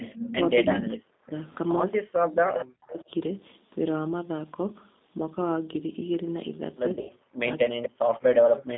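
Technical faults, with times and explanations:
Throughout: G.729 codec. The 8 kbit/s G.729A coder rebuilds speech from a filter and a few pulses per frame, so voice sounds rough and synthetic within a 200 Hz to 3.7 kHz band.
2.92 to 3.02 s: echo leak. A faint copy of the voice returns about 240 ms late, around 25 dB below the speech, likely the far end's echo canceller leaving residue.
6.93 to 7.12 s: VoIP packet loss concealed by the speech codec. About 120 ms of audio went missing across 160 ms, the decoder stretching the last sound into a fading buzz or noise before the voice recovers.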